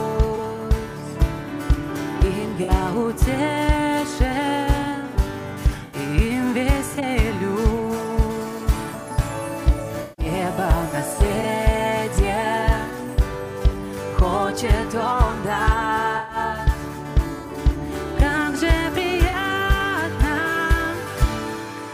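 Concealed frames break the sound at 0.36–0.39 s, 2.63–2.70 s, 5.86–5.97 s, 6.95–7.03 s, 10.02–10.26 s (the longest), 11.41–11.45 s, 16.17–16.37 s and 19.28–19.34 s. This is corrupt frame concealment. Bit errors damaged compressed frames, and the decoder detected them and papered over each gap by muting or by reusing a scrambled copy of the previous good spectrum.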